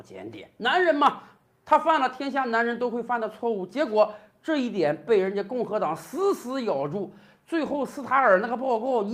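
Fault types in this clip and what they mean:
Nothing stood out on listening; no fault could be heard anywhere in the clip.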